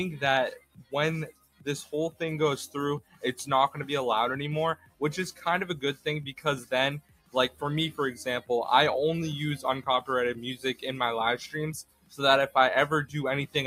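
A noise suppressor applied to music or sounds runs through the whole clip, treating steady, sustained content as noise and pulling it down, so the level swings by around 15 dB and the sound pumps and thins. Waveforms show held portions sagging between intact onsets, and spectrograms show patchy, smeared tails.

Sound cut by the noise suppressor occurs at 0.55–0.93 s, 1.27–1.67 s, 2.99–3.23 s, 4.75–5.01 s, 6.29–6.72 s, 7.0–7.62 s, 10.56–10.84 s and 11.83–12.2 s. These are dips of about 13 to 20 dB, each a few hundred milliseconds long, where sustained sound sinks or decays are chopped short. They look like dark gaps in the spectrogram and pinched envelope notches in the waveform.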